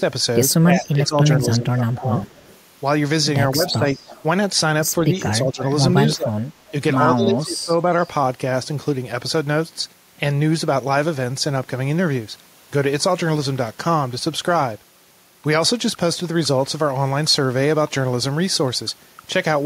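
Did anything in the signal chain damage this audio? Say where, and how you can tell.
Yes. The speech dips and partly cuts out at 0.58–2.12, 3.54–3.85, 5.02–5.62, 6.15–6.38 and 7.15–7.89 s, falling by about 10 to 20 dB. This is speech suppressed in double talk in call processing, likely an echo canceller ducking the talker while the far side spoke.

A faint, delayed copy of the speech follows 159 ms behind it at 0.77–1.07, 2.32–2.59 and 3.67–4.23 s, about 20 to 30 dB below the direct sound. This echo leak is likely loudspeaker pickup that the far end's echo canceller failed to remove and sent back.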